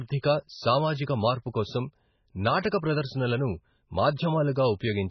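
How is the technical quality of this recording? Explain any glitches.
Quality is poor: heavy compression damage runs through the whole clip. This is likely MP3 compression starved of bits, consistent with a very low rate near 16 kbps. The encoder discards everything above 6 kHz and drops quieter frequency detail that flickers between frames, so the speech sounds dull, watery and swirly, with blurred consonant onsets.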